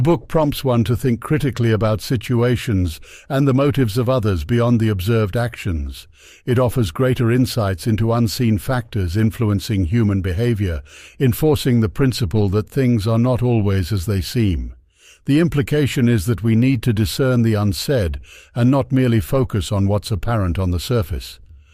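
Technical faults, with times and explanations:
Nothing faulty is audible anywhere in this speech.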